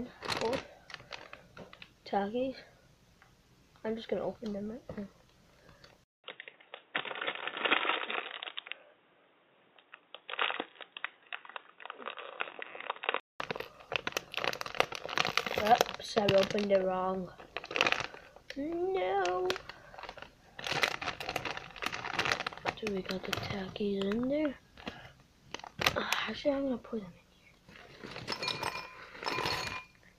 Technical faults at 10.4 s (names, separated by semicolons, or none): input switched to a poorer device